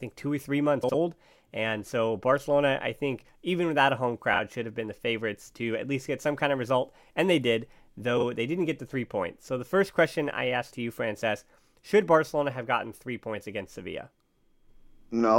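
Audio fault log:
0.83–0.95 s, frames out of order: just after "two or three months", two neighbouring blocks of about 52 ms each play in exchanged order, so the sound flutters where mismatched waveforms meet. No time is lost.
4.34–4.39 s, frames out of order: between "even without a home" and "should have been the", two 26 ms blocks are swapped, giving a brief garbled flutter.
8.17–8.23 s, frames out of order: between "they did" and "they didn't get the", two 26 ms blocks are swapped, giving the same brief garbled flutter.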